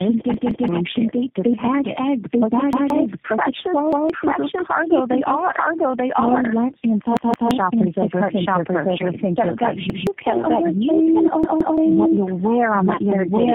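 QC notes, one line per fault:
Throughout: doubled audio track. A second full-band copy of the speech runs about a second behind the first at roughly the same level, so everything is heard twice. The late copy has no decay or room colour, so it's a clean duplicate rather than an echo. That points to a second capture over a slower path, or an edit holding two copies out of step.
Throughout: tandem speech coding. The call went through three speech codecs in a row: G.729A at 8 kbit/s, AMR-NB at 10.2 kbit/s, then G.729A again, with G.711 links in between. Each border meant a fresh decode and re-encode of already damaged audio, and the losses stack. The result is rougher, duller and more warbly than any single codec would make it, with nothing above 3.7 kHz.
0.34 to 0.68 s, 2.73 to 2.90 s, 3.93 to 4.10 s, 7.17 to 7.51 s, 9.90 to 10.07 s, 11.44 to 11.78 s: repeated buffer. Each time, fresh audio didn't arrive, so the player looped the last chunk of about 171 ms, which fits an 8192-sample buffer. 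That gives a stutter with hard joins at each repeat. It plays twice more at 0.34, 7.17 and 11.44 s, losing roughly 300 ms each time, and once more at the others, losing about 150 ms each.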